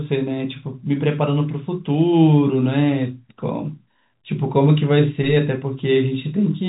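No technical faults detected.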